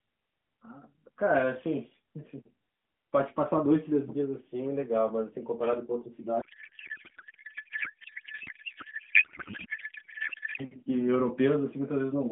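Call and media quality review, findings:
Codec payload misread, 6.42 to 10.64 s: speech replaced by garbled noise and warble barely tracking it. Receiver unpacking AMR frames with fields misplaced, which fits octet-aligned payload read as bandwidth-efficient. Surrounding narrowband AMR audio stays band-limited to about 3.6 kHz.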